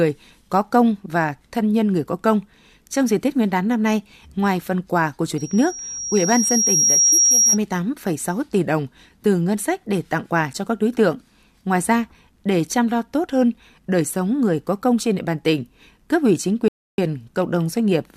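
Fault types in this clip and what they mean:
Loudspeaker feedback squeal: a microphone re-amplifies its own loudspeaker output, and at one frequency the loop gain exceeds unity. Here a pure tone near 5.6 kHz swells over about one and a half seconds, from 5.37 to 7.59 s, peaking roughly 5 dB above the speech.
Rebuffering stall: playback ran out of downloaded audio and paused until more data arrived. At 16.68 s the speech drops to silence for 0.3 s, then resumes at 16.98 s exactly where it stopped, so nothing is lost but about 300 ms is added.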